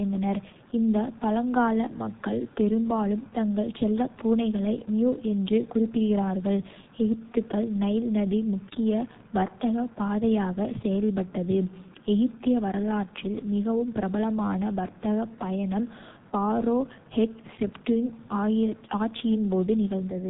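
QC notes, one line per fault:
throughout: G.723.1 codec, heavy damage. Speech is muffled and hoarse, with smeared consonants, which fits a very low rate near 6 kbit/s and slow 30 ms frame updates. On a spectrogram, energy stops flat at 3.8 kHz, and the harmonics look coarse and blocky.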